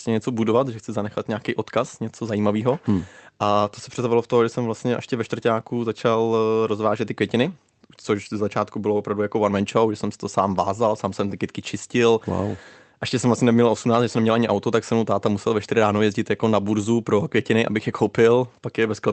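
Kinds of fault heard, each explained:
No faults heard in this speech; the call path's codec limits the bandwidth to 8 kHz, as expected.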